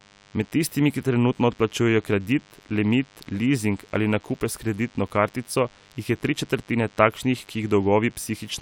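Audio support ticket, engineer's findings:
Thin, steady buzz under the speech, throughout. 100 Hz fundamental, dense harmonics, roughly 30 dB below speech. DECT cordless phone buzz: nearby handset or base bursting every 10 ms, rectified in mic preamp or input stage.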